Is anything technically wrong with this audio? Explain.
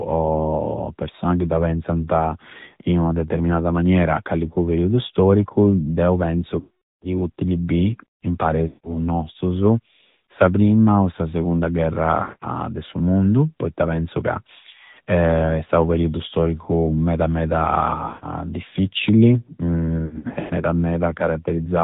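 Yes. The speech throughout sounds band-limited and plainly buzzy, with nothing above 4 kHz: an AMR narrowband mobile codec at 10.2 kbps models the voice from sparse pulses.

Lost AMR speech frames cause drawn-out, fading dropouts at 6.60–7.07 s, 8.68–9.06 s, 12.22–12.64 s and 18.08–18.25 s, plus scattered warbly gaps from 20.06 to 20.54 s. The decoder repeats the last good settings with falling gain.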